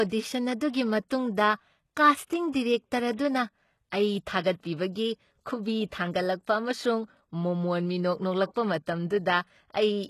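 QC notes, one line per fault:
Throughout: HE-AAC compression, plainly audible. Nothing reaches above 12.3 kHz, and the treble below that cutoff sounds synthetic, with s sounds turning gritty and lispy. The likely cause is spectral band replication, where upper bands are copied up from lower ones and shaped only coarsely, which fits a very low bitrate around 16 kbps. On a spectrogram, the top shows a hard ceiling at 12.3 kHz and smeared, repeated blocks of texture whose harmonics don't line up across the crossover.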